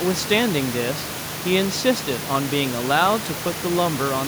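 No technical faults are present in the signal; the room's background noise sits about 11 dB below the speech and is part of the recording itself.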